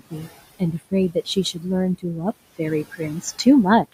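A short speech recording, about 4 s long, carries noise suppressor artifacts from start to finish. The suppressor pulls the steady room noise, which sits about 19 dB below the speech, down by about 18 dB between phrases and lets it rise back under them. On a spectrogram this shows as a background that blinks on and off in step with the speech, with a patchy, fluttering residue. From 0.00 to 0.27 s there is also speech cut by the noise suppressor. The opening sound is treated as noise and drops by as much as about 17 dB across roughly a tenth of a second in all, so it sounds swallowed. The waveform shows those first moments squashed well below the level that follows. At 2.31 s a 200 ms gap of silence is followed by a duller, boxier sound that continues to the end, a change in level of a few decibels and a faint new noise floor far below the speech. The likely cause is an input switched to a poorer device. 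The spectrogram shows a clean blank strip at the switch, and after it a narrower band, with less of the high-frequency energy that appeared before.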